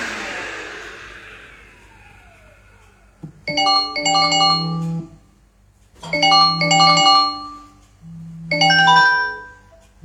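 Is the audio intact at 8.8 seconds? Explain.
Yes, the audio at 8.8 seconds is intact, with no dropout, click, distortion or other fault at that moment.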